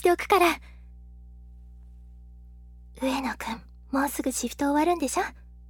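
From start to finish there's mains hum: a steady 60 Hz drone, roughly 25 dB under the signal, likely from a ground loop or a nearby transformer.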